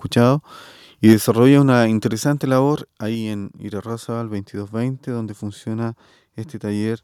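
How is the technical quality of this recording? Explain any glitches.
The recording has two related problems: a brief burst of distortion followed by two sudden drops in level.

Microphone overload, 1.07 to 1.13 s: the input gain was likely set too high, so the loudest peaks drove the converter about 2 dB past its ceiling. Around a tenth of the samples in that stretch have their tops sheared flat. What you hear is a short, harsh crackle on the strongest part of the speech, a gritty edge the voice itself doesn't have.

Microphone volume stepped down, at 1.13 s and again at 2.13 s: the call software likely reacted to a microphone it judged too loud by cutting the device's input volume in single steps, first by 3 dB and then by a further 4 dB. Because the change is made at the microphone input, the voice and the room sound behind it drop together. The first drop comes right after the crackle. 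The second makes the speech quieter from 2.13 s onward.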